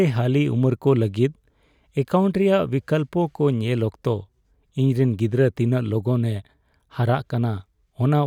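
No technical faults are audible.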